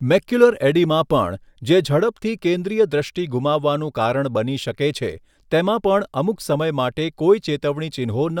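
A speech recording with nothing technically wrong in it.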